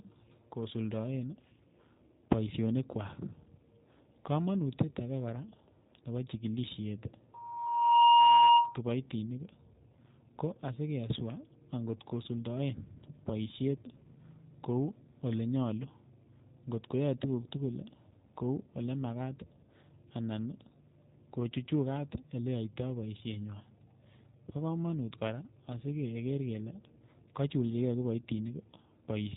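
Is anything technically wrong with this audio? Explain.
Yes, two problems are audible.

Throughout, the speech has G.729 codec damage: the sound is rebuilt from a filter, pitch predictor and sparse pulses at a rate that fits 8 kbit/s, so it sounds rough and synthetic, and a spectrogram shows nothing above 3.8 kHz.

From 7.34 to 8.80 s there is a loudspeaker feedback squeal: the microphone picks up its own loudspeaker and one frequency keeps re-amplifying itself. It swells over most of a second into a 945 Hz tone well above the speech, seen on a spectrogram as a bright horizontal line.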